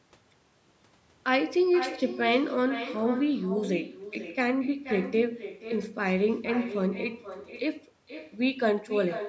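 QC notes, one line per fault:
Throughout, echo with no canceller: every phrase returns about half a second later as a weaker copy, about 12 dB down, thinner, because the far end's loudspeaker feeds its microphone and nothing subtracts it. On a waveform each burst trails a smaller delayed burst filling the gaps. On a spectrogram, faint duplicated harmonic patterns sit shifted right, stopping like the original at 8 kHz, the call microphone processing's limit.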